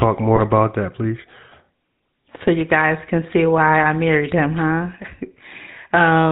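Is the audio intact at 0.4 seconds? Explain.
No, not quite. From 0.36 to 0.40 s, just before "about that please", there's a lost GSM frame gap, roughly one frame's worth. The decoder repeats the last good frame, so you get a brief rough, metallic ring. Underneath that, the GSM full-rate codec runs the whole way. Its pulse-driven vocal-tract model, at what sounds like 13 kbps with nothing above 4 kHz, leaves a plainly audible buzzy, gravelly roughness.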